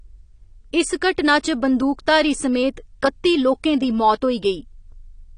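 Likely AAC compression at a low bitrate, consistent with AAC-LC near 32 kbps, runs throughout the speech. The encoder discarded everything above 10 kHz and quantised the rest coarsely, leaving the sound dull and smeared, with plainly audible warbling and fizz on sibilants.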